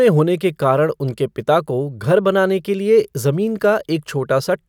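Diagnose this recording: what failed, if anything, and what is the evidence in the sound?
Nothing failed; no fault is audible in this recording.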